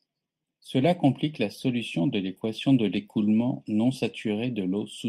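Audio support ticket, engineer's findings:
Channel delay (comb filtering), full length: hollow, phasey tone throughout. Probable component: stereo-to-mono downmix with one channel late by under half a millisecond. Common content cancels, first notch around 1.5 kHz, further notches evenly spaced above. Spectrogram: fixed dark horizontal bands that don't move with pitch or level. Waveform: no visible defect; the fault shows only in the spectrum.

Lost packet rebuilt from error correction, 0.77–0.83 s, just before "complique la solution de": brief rough, noisy patch with no gap or dropout. Probable component: Opus decoder using in-band FEC copies, about 40 ms rebuilt, which points to two separate lost packets. The copies are low-bitrate, hence the coarseness. Spectrogram: a short smeared, grainier block with less fine harmonic detail. Waveform: continuous, no silence.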